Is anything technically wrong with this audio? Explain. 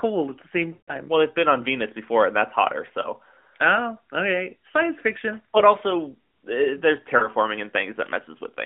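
Yes: lost AMR speech frames. The speech smears and fades briefly at 0.74–0.96 s, 3.02–3.08 s, 5.58–5.63 s and 7.18–7.28 s, as the decoder replays the last good parameters with falling gain.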